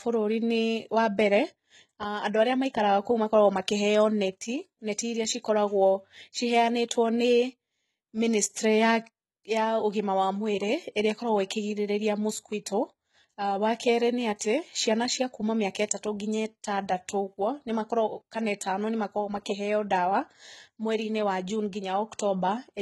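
The speech was likely encoded with HE-AAC at a very low rate, around 16 kbps. Its treble is rebuilt from copied lower bands, so s sounds come out gritty and lispy, with heavy codec damage throughout and nothing above 11.8 kHz.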